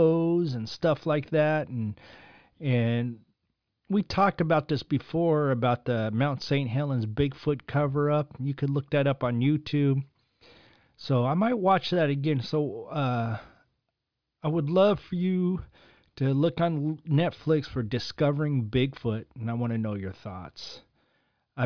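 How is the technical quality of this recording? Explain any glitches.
No technical glitches can be heard anywhere in the speech, so there is nothing to explain.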